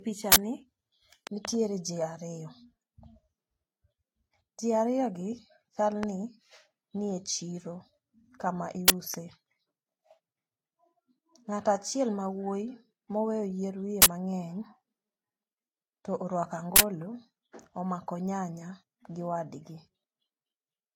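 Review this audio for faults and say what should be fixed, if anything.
Throughout, the speech has a smeared, swirly high end with a dull ceiling, the likely result of transcoding between lossy codecs: Vorbis at 38 kbit/s, re-encoded to HE-AAC at 40 kbit/s, each adding its own artefacts. Encode once from the original source.

Harsh bursts of digital noise at 0.32–0.36, 8.88–8.90, 14.02–14.06 (just after "moweyo yier wiye") and 16.76–16.80 s come from an uninitialised buffer played before being filled. Their lengths fit 40 ms and 20 ms blocks. Zero or fill each buffer before playback.

Loud pops sit on top of the ongoing speech. There is a double pop at 1.27–1.47 s, about 15 dB above the signal, just before "jii ariyo". Single pops occur at 6.03–6.05 s (about 20 dB) and 9.14–9.16 s (about 10 dB). The likely cause is electrical steps from a switch, connector or driver glitch. Secure the connections and mute the outputs while switching.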